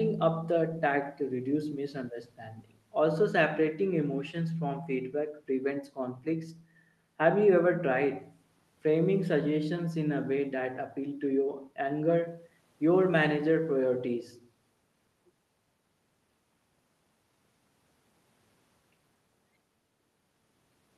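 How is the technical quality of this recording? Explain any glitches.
Nothing stood out on listening; no glitches or technical faults were heard anywhere in the recording.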